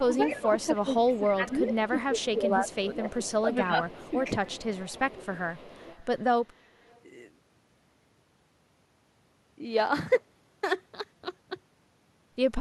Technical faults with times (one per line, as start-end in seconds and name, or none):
0.06-4.23 speech suppressed in double talk
0.30-1.73 echo leak
1.99-2.26 echo leak
2.68-3.42 echo leak
3.88-7.00 echo leak